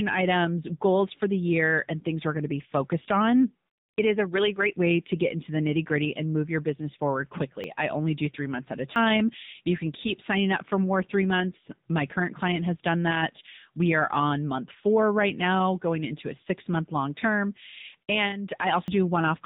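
Throughout, the speech carries AMR narrowband mobile codec damage. Nothing above 4 kHz survives. The voice sounds buzzy and synthetic, which fits a mode near 8 kbps.

At 7.64, 8.96 and 18.88 s, the speech jumps ahead by about 40 ms. A dropped buffer (overrun) is the likely cause.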